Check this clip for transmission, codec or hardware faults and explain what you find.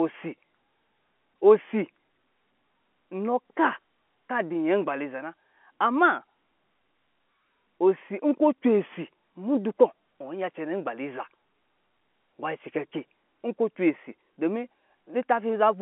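No transmission, codec or hardware faults turn up in this clip.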